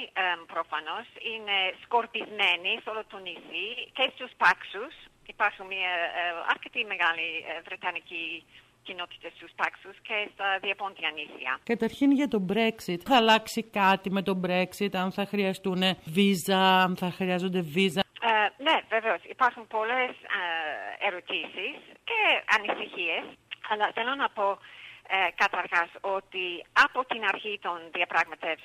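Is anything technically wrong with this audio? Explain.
Yes. From 21.43 to 22.93 s, sample clock jitter: the unstable clock mistimes samples by under a microsecond. This adds a faint hiss roughly 40 dB down, strongest on loud, bright sound.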